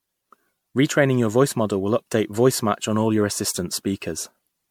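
From start to finish the speech has a swirling, watery smear, with a hollow, scooped-out tone and consonant attacks that blur rather than snap. The top end stops at about 19.8 kHz. This is the sound of generation loss, likely from the audio being decoded and re-encoded as MP3 around seven times, which fits a chain at about 96 kbit/s. Each pass requantises on a shifted frame grid, so noise and spectral gaps pile up.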